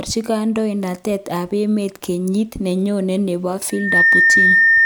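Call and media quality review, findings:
Mic-to-speaker loop gain above unity at 1.8 kHz, causing loudspeaker feedback squeal, 3.70–4.86 s. Microphone recapturing its own loudspeaker output; single 1.8 kHz tone swells over about a third of a second, then sits roughly 10 dB above the speech until the end.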